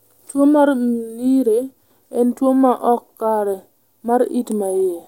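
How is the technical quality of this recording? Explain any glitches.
The technical quality of this recording holds up, and there are no glitches to explain.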